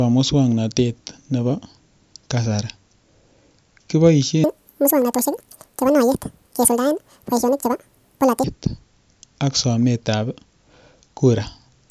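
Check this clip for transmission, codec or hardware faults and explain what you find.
One fault stands out: a wrong sample rate from 4.44 to 8.44 s. Through that stretch the speech suddenly sounds squeaky and rushed, running at twice normal speed and a full octave, 12 semitones, higher. Speed and pitch rise together because the samples are being clocked out faster than they were captured, with no rate conversion in between. A doubling like this fits audio recorded at 16 kHz being played back as if it were 32 kHz.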